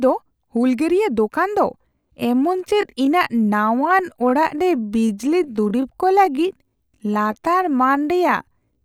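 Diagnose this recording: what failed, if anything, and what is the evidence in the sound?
At 1.77 s, before "ᱛᱟᱨ ᱵᱮᱣᱦᱟᱨ", the speech abruptly slows to 0.73× pace at unchanged pitch, dragging to the end. This is a time-stretched section, likely from software repeating short pieces.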